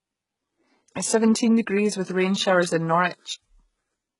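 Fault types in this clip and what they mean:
HE-AAC compression: The whole speech clip sounds like it went through a very low-bitrate codec, likely HE-AAC, with the damage pointing to something around 12 kbps. Only the lower band seems to be properly coded, and the treble is rebuilt by copying lower content upward, so the s sounds come out gritty and lispy instead of clean. The degradation is heavy, and nothing sits above about 11.1 kHz.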